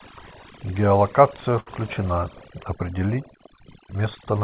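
Overdone noise removal runs through the whole clip: the noise reducer was set too strong, pulling individual frequency bands far down whenever they came near its noise estimate, quieter parts of the speech included. The background drops and breaks up into twinkling specks, and the voice sits in a call band that stops at 4 kHz.

At 1.60 to 1.68 s comes a short stall from a late packet: the jitter buffer ran dry, so the receiver stretched the last sound by about 64 ms until the packet arrived, then resumed from the same place. Nothing is lost, but one sound is held too long.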